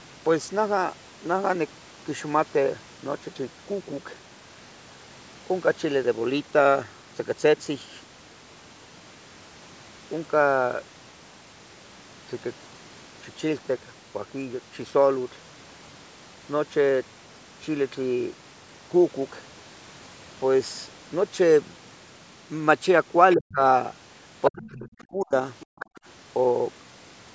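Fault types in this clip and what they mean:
Other side's voice leaking through: the echo canceller likely left part of the loudspeaker signal in the microphone path. Scraps of a second voice slip through around 23.3, 24.4 and 25.6 s, between roughly 20 and 10 dB below the talker.
Speech suppressed in double talk: with both sides talking at once, the canceller likely mistook the talker for echo and pulled everything down. The talker's speech dips deeply, by up to around 30 dB, near 23.4 s and again from 24.5 to 25.3 s.
Background gated by the echo canceller: while the loudspeaker was active, the canceller clamped the microphone hard. From 25.66 to 25.95 s the room sound drops away by about 40 dB, for roughly a fifth of a second in total, then returns.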